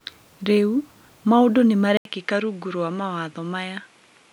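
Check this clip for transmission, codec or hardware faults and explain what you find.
One fault is present. From 1.97 s, after "maũndũ nĩ", an 80 ms gap leads into duller, quieter speech with nothing above 11.4 kHz. This is likely an input switched to a poorer device. The spectrogram shows a hard ceiling and the waveform a slightly lower level, with a new noise floor about 50 dB down.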